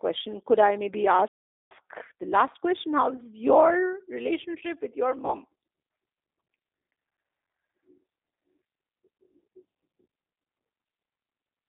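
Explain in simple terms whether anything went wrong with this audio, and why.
Yes, several things went wrong. The whole recording passed through a G.729 codec, a low-rate telephone speech coder that doesn't store the actual sound wave. It sends a rough description of the voice and rebuilds it at the other end. It also keeps only the range from about 300 Hz to 3.7 kHz. So throughout, the speech sounds narrow, muffled and phone-like, with a clearly rough, slightly artificial edge.

From 1.28 s to 1.71 s there is a playback stall. The player most likely ran short of data, or was briefly held up, and had nothing to send out. You hear the sound stop dead in mid-flow for about 0.43 s, a noticeable hole, before it carries on again.

Twice the call suffered VoIP packet loss concealed by the speech codec, at 3.16 to 3.23 s and at 5.25 to 5.33 s. Each time, a small chunk of audio, roughly 20 ms and consistent with a single lost packet, never arrived. 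The decoder filled the hole by guessing from the voice just before it. That produces a short buzzy or smeared blip, and the voice sounds slightly off for a moment afterwards while the decoder recovers.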